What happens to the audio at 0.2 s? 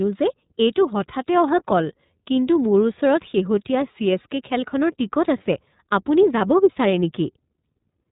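At 0.2 s the speech already carries iLBC codec damage, present throughout the clip. Each 30 ms frame is coded independently, which fits the 13.33 kbps mode, giving a plainly rough, synthetic edge. A spectrogram shows a hard ceiling near 3.8 kHz, with nothing above it.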